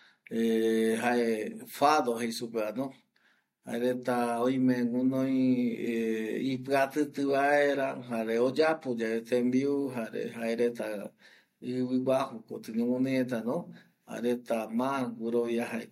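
An adaptive stream at a lower bitrate affects this speech clip from 5.25 to 9.25 s. When the connection slowed, the player switched to a leaner encoding, which fits a drop from a 96 kbit/s AAC-LC stream to a 24 kbit/s HE-AAC one. The quality changes abruptly with no gap. For those four seconds the treble takes on a synthetic, reconstructed character and codec artefacts thicken, and nothing is heard above 14.9 kHz.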